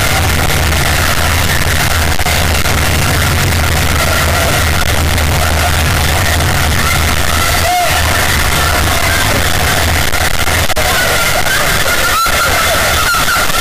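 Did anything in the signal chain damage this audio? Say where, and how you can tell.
Yes, at the sample-format conversion stage, throughout. The sound is a harsh, near-square block at an almost fixed, high level, with noise as loud as everything else. That likely means 32-bit float samples were read as 32-bit integers, a float read as integer.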